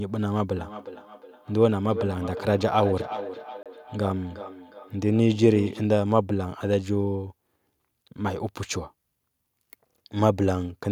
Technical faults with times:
0.57-5.94 feedback echo between two devices
3.63-3.66 Bluetooth stall

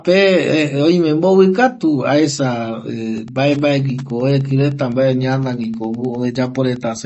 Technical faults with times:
0.00-7.05 MP3 compression
3.14-7.05 Wi-Fi interference

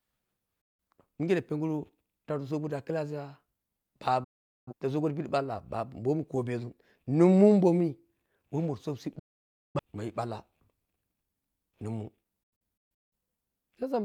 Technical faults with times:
0.61-0.80 digital broadcast dropout
4.24-4.73 digital broadcast dropout
9.19-9.79 digital broadcast dropout
12.43-13.13 digital broadcast dropout

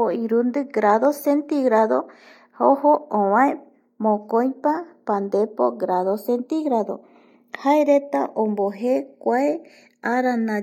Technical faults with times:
0.00-10.62 channels drifting apart

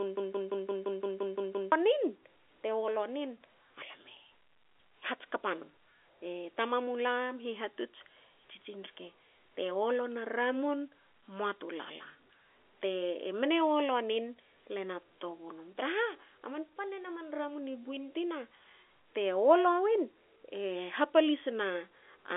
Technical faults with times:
0.00-1.72 broken-record loop

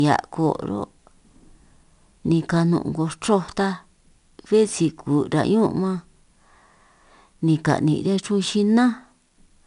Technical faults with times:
0.00-9.67 4-bit ADPCM compression

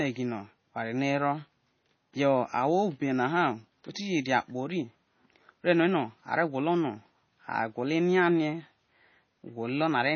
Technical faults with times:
0.00-10.15 MP3 compression

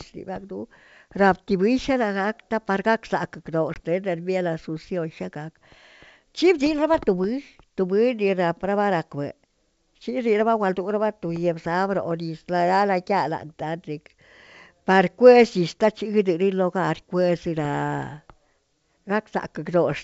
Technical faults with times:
3.74-3.80 packet loss on an ADPCM call

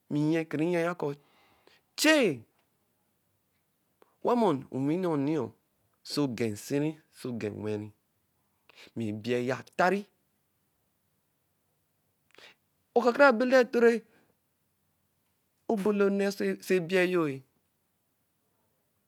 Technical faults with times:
none

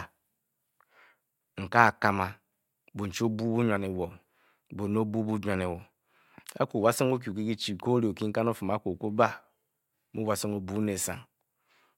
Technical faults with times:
none

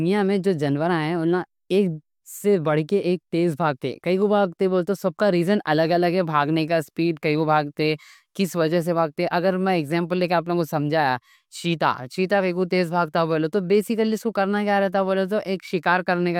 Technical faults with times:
none

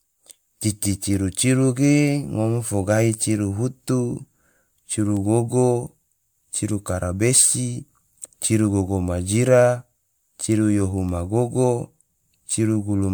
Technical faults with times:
0.00-13.14 generation loss

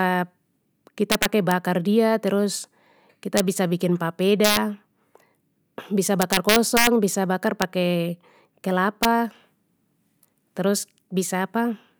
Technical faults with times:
1.12-1.51 integer overflow
3.37-3.40 integer overflow
4.44-4.57 integer overflow
6.22-6.87 integer overflow
7.62 integer overflow
9.03-9.05 integer overflow

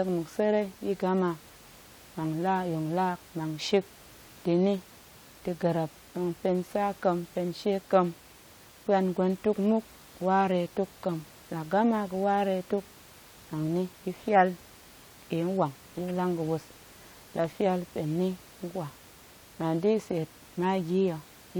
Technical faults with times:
none

